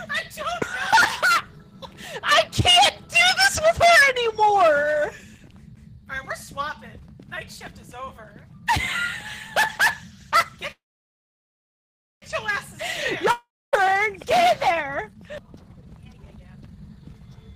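From 10.71 to 12.24 s the sound smears into a brief fading buzz, then about 1.4 s of silence, and resumes where it stopped. This is a call audio freeze, likely from delayed packets starving the jitter buffer.

At 13.31 to 13.75 s a short fading tail gives way to silence, and the audio returns about 0.42 s further on. This is a long network dropout, likely lost packets that were never played.

From 15.35 s to 17.54 s the sound runs hurried at 168% speed with unchanged pitch. This is a jitter buffer speed-up, where repeated pitch-period cuts removed roughly one and a half seconds to shrink the backlog.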